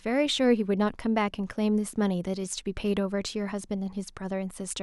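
No technical faults can be heard anywhere in the recording.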